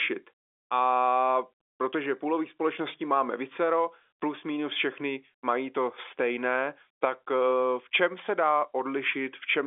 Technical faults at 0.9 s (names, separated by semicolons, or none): none